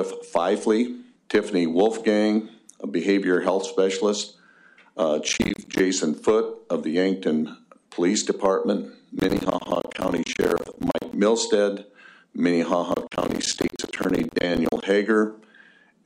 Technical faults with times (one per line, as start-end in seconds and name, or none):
5.29-5.79 processor overload crackle
9.20-11.13 processor overload crackle
12.92-14.83 processor overload crackle